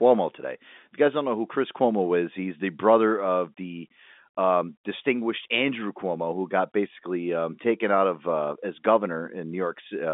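The speech sits within a telephone band of about 200 Hz to 3.6 kHz, as expected from G.711 mu-law coding on a fixed line, and nothing in the signal stands out as a technical problem.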